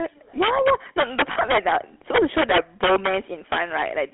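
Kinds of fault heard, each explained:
Integer overflow: peaks driven about 7 dB past full scale wrap to the opposite sign, so loud syllables crack violently; the waveform shows sudden full-range polarity jumps.
GSM full-rate codec: the voice is rebuilt from a vocal-tract model and sparse pulses, giving buzzy, gravelly speech; the spectrogram shows energy confined to roughly 250 Hz to 3.5 kHz.
Lost GSM frames: from 1.32 to 1.37 s, about 40 ms of sound is held by repeating the last good frame, ringing metallically; the spectrogram shows smeared, frozen bands there.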